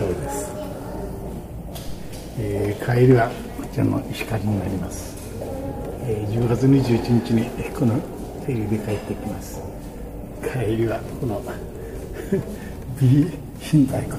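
At 1.87 s there's a phantom power thump: supply switched on or off on a live input, the step bleeding through the coupling capacitors as a deep thud peaking around -24 dBFS, dying away within about 0.1 s, gone by 2.32 s.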